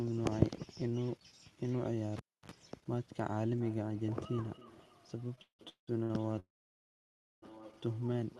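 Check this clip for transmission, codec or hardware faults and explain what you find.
Four faults are audible in this speech clip, which comes through an Opus call path whose coding noise and roll-off above 12 kHz fit a stream of around 32 kbps.

From 2.17 to 2.52 s a live cable was pulled out and plugged in again. Breaking the signal connection produces a pop, then about 0.3 s of near silence. While only the plug tip makes contact, the unshielded conductor picks up 50 Hz mains hum, which is heard as a buzz of about 63 ms. A second pop follows as the full connection returns and the sound comes back.

Feedback echo between two devices begins at 3.61 s and lasts to the end. A second device in the room plays the call back into the microphone. The local echo canceller only removes what its own device plays, so it cannot cancel that sound. The speech therefore comes round again at roughly a third of a second, thinner and more ringing on each pass, peaking at about 17 dB below the direct speech.

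Repeated stalls run from 5.35 to 6.12 s. Packets kept arriving late, and the jitter buffer emptied five times. Each time, the receiver stretched the last sound to cover the wait, with the longest gap lasting 184 ms. Concealment fills 441 ms, more than half of that stretch. Nothing is lost, but the speech drags and stutters.

A call audio freeze follows from 6.40 to 7.44 s. The sound stops with a brief fading continuation, then goes nearly silent for about 0.96 s. It resumes where it left off and nothing is missing. The likely cause is packets held up in transit until the jitter buffer ran dry. That wait inserted about 1.03 s of extra delay.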